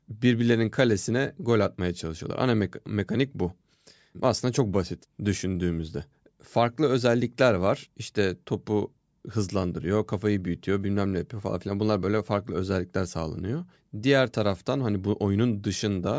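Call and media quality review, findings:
Call and media quality review findings: no faults found in this speech clip.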